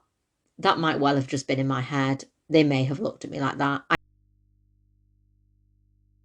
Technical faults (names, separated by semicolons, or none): audio dropout to a faint residue